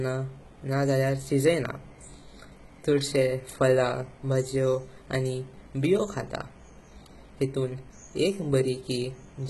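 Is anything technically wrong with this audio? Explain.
Yes. Throughout the speech, the treble sounds synthetic rather than recorded, and nothing reaches above 11.8 kHz. The likely cause is HE-AAC compression with heavy damage, consistent with an HE-AAC v2 stream at a very low bitrate, around 16 kbps. Only the lower spectrum is truly coded, and the upper band is patched in from copies of lower bands, so its harmonics don't line up. S sounds come out gritty and metallic. A spectrogram shows a hard ceiling at 11.8 kHz and repeated, smeared blocks above the crossover.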